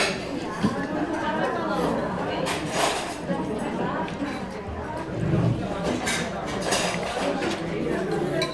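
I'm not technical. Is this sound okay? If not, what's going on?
Yes, the sound is fine: nothing in the signal points to a technical problem at any point.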